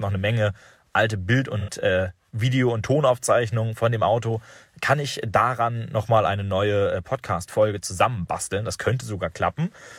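At about 1.59 s the speech is hit by AAC frame loss with concealment, lasting roughly 85 ms until 1.69 s, which fits two consecutive lost frames. With no data for that stretch, the decoder rebuilt it from the last good spectrum, so the sound turns briefly smeared and noisy rather than dropping out. On a spectrogram the harmonic lines blur into a flat, frozen smudge, and the waveform loses its clear periodic shape for that moment.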